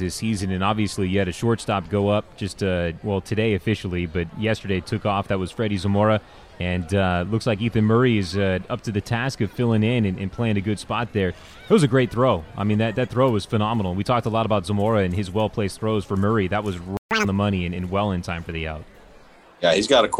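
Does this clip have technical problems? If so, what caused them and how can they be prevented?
Yes. The first fault is a playback stall at 16.97 to 17.11 s. The player was likely starved of data or had its output thread blocked, so it had nothing to send to the audio device for about 139 ms. The result is a hard gap of silence cutting the sound off mid-flow, after which it resumes. A larger playback buffer and keeping the audio thread free of blocking work, such as disk or network calls, would prevent this.

The second fault is catch-up at higher speed, from 17.11 to 17.25 s. Having fallen behind during the stall, the player resampled its backlog to run at 2.0 times normal speed until it had made up the lost time. For that short stretch the sound rushes and jumps up in pitch by about ten semitones, then snaps back to normal. Preventing the stall removes the need for catch-up, and any remaining drift is better corrected gradually or with pitch-preserving time-stretching.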